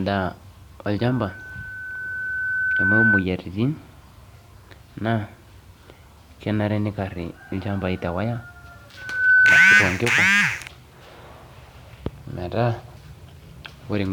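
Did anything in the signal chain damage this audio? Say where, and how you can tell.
Yes. A single steady tone at 1.5 kHz swells up from 0.98 s to 3.26 s, growing over a couple of seconds, and returns from 8.97 s to 9.85 s, this time rising within a fraction of a second, both times reaching roughly 10 dB above the speech. That is loudspeaker feedback squeal in the acoustic and analogue stage. A microphone is picking up the loudspeaker it feeds, and at 1.5 kHz the loop gain exceeds one, so that frequency keeps reinforcing itself.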